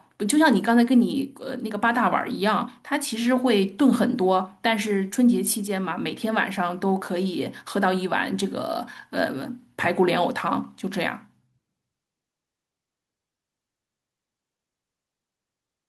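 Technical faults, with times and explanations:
No technical faults can be heard anywhere in the speech. Nothing in the recording calls for a time or an explanation.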